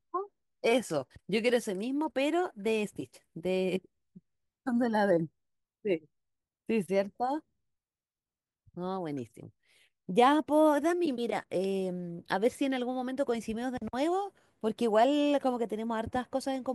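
A speech recording with nothing technically wrong to point at anywhere in it.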